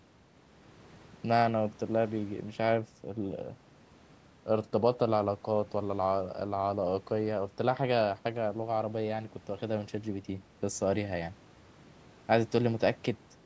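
Nothing stood out on listening to this speech recording, which has passed through call microphone processing that limits its content to 8 kHz and below.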